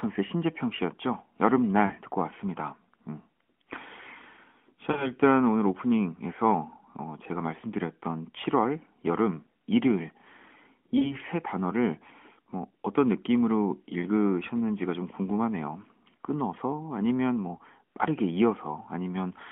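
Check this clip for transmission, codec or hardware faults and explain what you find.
There are lost AMR speech frames at 1.86 to 1.92 s, 4.92 to 5.11 s and 10.98 to 11.16 s. Each gap, about 40 ms or two frames, is briefly smeared, then the level sags toward silence. On a waveform the envelope flattens and tapers, and on the spectrogram the harmonics hold steady then fade. The decoder is repeating its last good pitch and vocal-tract settings with falling gain. All of this sits inside the AMR narrowband codec's band, roughly 200 Hz to 3.4 kHz, with light, clean-sounding coding that fits the 12.2 kbps mode.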